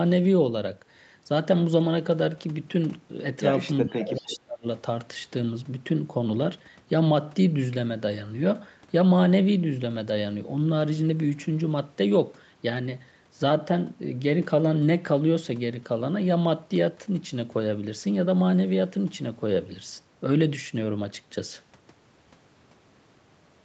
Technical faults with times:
3.83-4.67 speech suppressed in double talk
3.99-4.37 echo leak

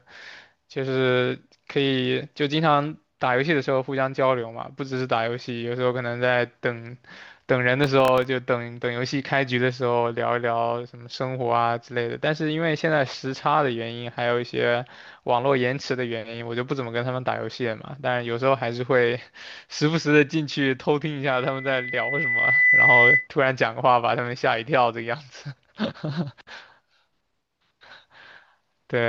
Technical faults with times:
7.84-8.25 processor overload crackle
21.23-23.28 loudspeaker feedback squeal

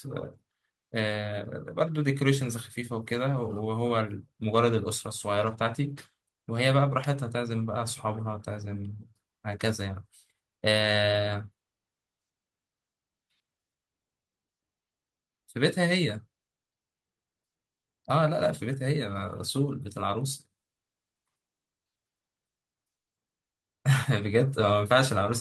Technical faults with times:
none

